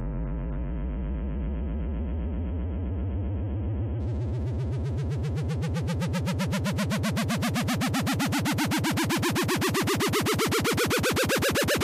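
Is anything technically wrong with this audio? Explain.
Yes. From the start to 4.0 s the audio is an adaptive stream starting at a low bitrate. The player opened on a heavily compressed version, roughly what a 16 kbit/s AAC stream delivers, and switched to a richer one once it had gauged the connection. Until then nothing is heard above about 3.4 kHz, so the sounds are dull and smeared with codec artefacts. At 4.0 s the full treble returns abruptly, with no gap, consistent with a step up to around 96 kbit/s.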